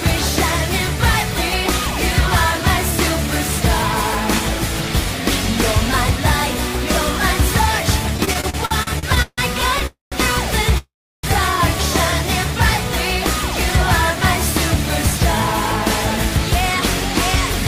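Between 8.17 and 9.41 s the audio breaks into repeated stalls (stutter): ten short gaps, the longest 158 ms, together about 424 ms of held-over sound, roughly a third of that stretch. Packets were reaching the receiver more slowly than they were played out, so the jitter buffer kept running dry and the last sound was continued each time. Nothing is lost, but the passage drags and judders. Two call audio freezes follow, at 9.87 to 10.15 s and 10.78 to 11.26 s. In each, the sound is carried on as a fading tail and then drops to silence, about 150 ms of silence in the first and 340 ms in the second. Playback then resumes exactly where it stopped, having slipped 252 ms and 456 ms later. The likely cause is packets held up in transit until the buffer emptied.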